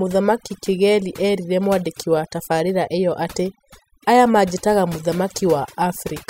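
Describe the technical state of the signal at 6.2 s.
At 6.2 s the speech carries overdone noise removal, present throughout: bands near the noise estimate are cut, leaving twinkling specks, seen as scattered isolated dots on a spectrogram.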